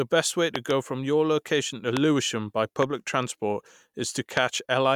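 Loud pops occur as a double pop at 0.56 to 0.73 s, then single pops at 1.97 to 1.99 s, 2.83 to 2.85 s and 4.37 to 4.39 s. They peak about 20 dB above the speech, the third nearer 15 dB. Each is likely a voltage pulse from a switch, plug or static discharge, and the speech continues underneath.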